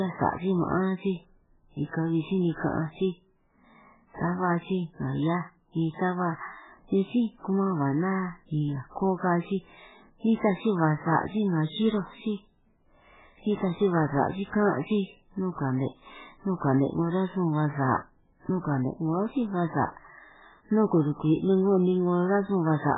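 MP3 compression runs throughout the speech: nothing remains above 3.8 kHz, and the sound turns watery and swirly, likely from encoding at a very low bitrate, around 8 kbps.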